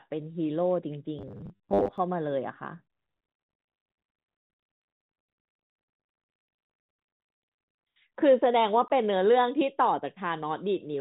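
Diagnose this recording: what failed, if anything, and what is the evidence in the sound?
Between 1.19 s and 1.98 s the sound turns into a rigid, metallic buzz locked at 100 Hz while still loosely tracking the underlying syllables. That is robotic sound from repeated short buffers, most likely at the driver or buffer stage. Fresh samples arrive too slowly, so the same 10 ms block is replayed to fill the gap, and the 100 Hz repetition rate fits that block length. Roughly half the audio in that stretch is repeats rather than new material.

From 8.88 s to 8.90 s there is a 20 ms hole of digital silence with hard edges. This is packet loss filled with silence at the network stage. The receiver had nothing to play for that interval and inserted zeros instead of concealing the gap. The duration points to two consecutive lost packets of 10 ms each. The surrounding band-limited telephone character comes from the G.711 mu-law path at 64 kbps, which shows at most faint coding damage.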